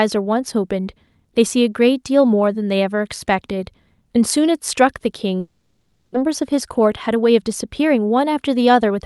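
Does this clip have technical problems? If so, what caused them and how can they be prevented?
Yes. A long network dropout runs from 5.39 to 6.16 s. The receiver extends the last sound as a fading buzz, then goes silent for about 260 ms, and roughly 400 ms of audio never returns. The likely cause is a delay jump of around 300 ms. Prevention: use a more stable network path, for example wired rather than congested Wi-Fi.

A jitter buffer speed-up follows from 6.27 to 8.98 s. Having filled up after the delayed audio arrived in a burst, the buffer repeatedly trims pitch-period-sized pieces, about 150 ms in total. Playback runs at 106% speed at unchanged pitch and sounds hurried. Prevention: reduce delay variation on the link so the buffer does not overfill.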